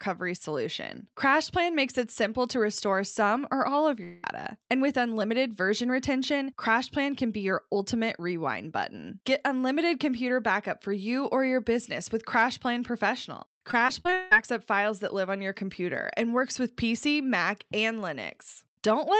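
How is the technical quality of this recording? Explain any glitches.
The speech carries two network-related glitches, one dropout and one burst of choppy, robotic audio, heard over a call-codec path whose top end stops near 8 kHz, which fits Opus at around 32 kbps.

At 4.03 to 4.25 s, right after "some or all of", about 0.2 s of speech is gone. The gap is bridged almost entirely by a smeared continuation of the preceding sound rather than silence, and speech resumes with that portion absent. This is likely a long network dropout: the stream stalled, the receiver extended the last frame to cover it, and the lost audio was never recovered.

From 13.71 to 14.33 s, just before "up files that live", the speech breaks up in a repeated packet loss (robotic sound) pattern. Six separate gaps, the longest about 0.17 s, remove roughly 0.3 s of audio. Each hole is patched by repeating the last sound before the next one arrives, so about 45% of this stretch is synthetic fill. 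The result is a stuttering, choppy texture with syllables partly missing.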